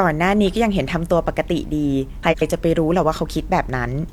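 From 2.22 to 2.42 s, frames arrive out of order. Two neighbouring runs of about 93 ms swap places. The sound flutters.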